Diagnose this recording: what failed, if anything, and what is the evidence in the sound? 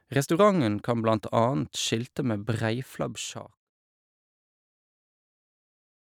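Nothing failed; speech fades smoothly out by 3.7 s.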